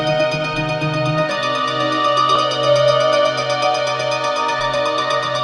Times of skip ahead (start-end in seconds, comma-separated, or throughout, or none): 2.35-2.37